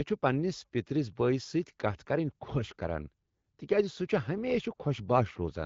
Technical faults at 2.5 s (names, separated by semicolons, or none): none